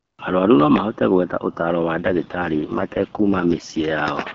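From 1.98 to 3.98 s there's an AMR rate drop. The speech turns rough and synthetic, which fits the codec falling from 12.65 to 6.6 kbit/s, before clearing again.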